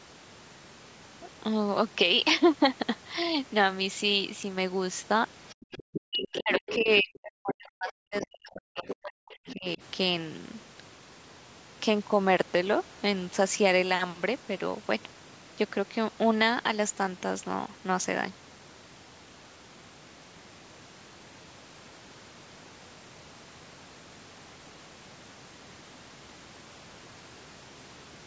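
From 5.49 s an echo canceller likely failed to remove the loudspeaker signal, so the other side's voice leaks through in scraps at 5.49, 6.21, 6.67, 8.19, 8.87 and 9.31 s, about 10 to 20 dB under the speech. Alongside this, speech is suppressed in double talk: with both sides active, the canceller likely could not tell the talker from the echo and turned everything down. The voice dips by up to about 40 dB between 5.91 and 9.31 s, then by about 15 dB from 9.53 to 9.81 s.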